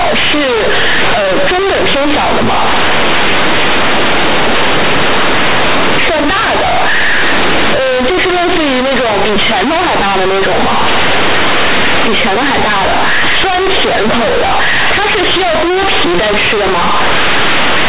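Throughout the speech, companded audio is read as linear: mu-law bytes play unexpanded, so the waveform swings over about half its range even in pauses, and the spectrogram fills with dense broadband buzz.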